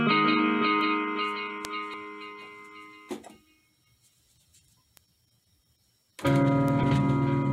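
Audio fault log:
0.81 s, 1.65 s, 4.97 s, 6.68 s: bit error spike. Each is a single sharp, broadband tick that has nothing to do with the surrounding sound. A flipped bit throws one sample, or three in a row at 1.65 s, off by a power of two before it snaps back.
1.94 s: compressed frames skipped. The audio lurches forward by roughly 70 ms. This fits about two missing or rejected 32 ms frames.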